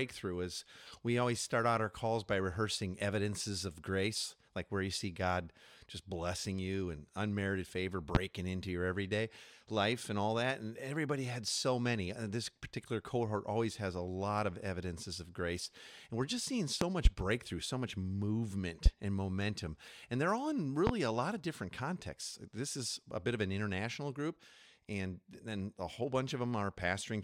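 Five loud pops sit on top of the speech: at 8.15–8.19 s, between "you and unmerited favor" and "into your everyday life"; a double pop across 16.81–17.09 s; at 18.86–18.89 s, just before "and momentum"; and at 20.87–20.91 s, between "they're all in" and "a lot of different". Each is a sharp transient peaking around 25 dB above the speech, which continues underneath. They are likely voltage spikes from a switch, connector, static discharge or driver glitch.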